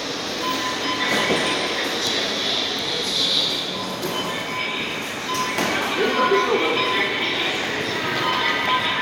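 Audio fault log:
No faults heard anywhere in this recording.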